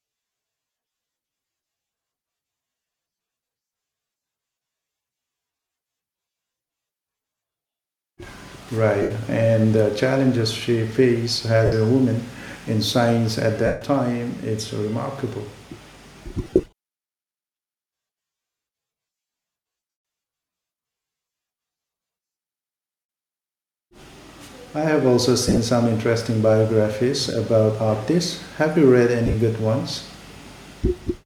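Lost LE Audio frames: the Bluetooth link dropped LC3 frames, and the decoder filled each gap by reusing the last spectrum with random signs. The speech smears into short noisy hiss at 9.02, 11.66, 13.66, 16.44, 19.90, 23.00, 25.48 and 29.26 s, each lasting 50 to 290 ms.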